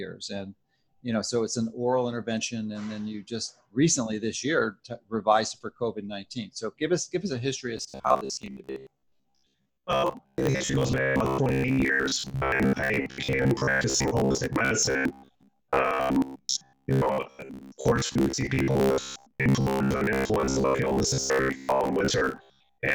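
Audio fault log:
7.77–22.95 s robotic sound from repeated short buffers: rigid 66.8 Hz metallic buzz, likely a 15 ms block looped over most of the audio; spectrogram shows evenly spaced harmonic lines.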